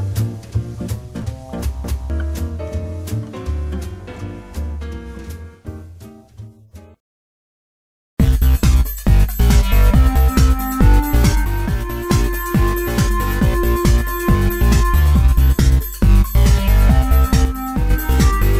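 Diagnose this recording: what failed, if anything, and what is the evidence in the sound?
The level drops abruptly by about 6 dB at 11.45 s and recovers at 12.10 s, then again from 17.45 to 17.90 s, with the background noise falling and rising in step. This sudden gain jump likely comes from a digital gain change or bit shift in the processing chain, applied without a ramp.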